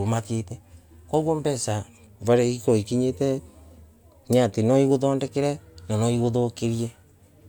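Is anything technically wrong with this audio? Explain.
No, nothing is technically wrong with this audio. The speech recording shows no fault that a listener could point to.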